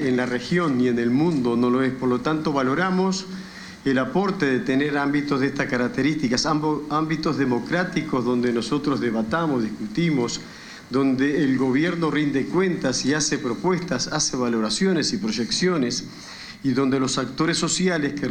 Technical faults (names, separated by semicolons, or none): none